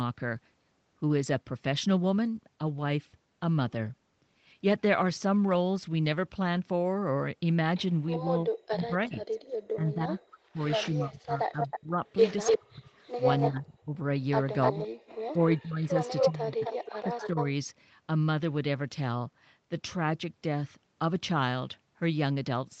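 At 8.11–8.16 s a faint echo leak appears: a copy of the far end's sound delayed by 355 ms, about 25 dB below the speech, which likely slipped past the remote echo canceller after its loudspeaker output reached its microphone. From 8.2 to 12.9 s, speech suppressed in double talk turns the talker down, with about 3 s affected and drops of around 40 dB. The canceller likely could not separate the local talker from the echo and attenuated both.

The echo returns at 11.61–11.79 s and 12.46–13.5 s with a 297 ms delay. It is about 5 dB below the speech in the first stretch and about 5 dB above it in the second. Suppression recurs at 13.49–14.0 s. Echo follows at 14.62–14.88 s and 15.52–17.42 s, the last at roughly speech level. It overlaps further suppression from 14.72 to 17.38 s, with about 1.5 s affected and dips near 35 dB.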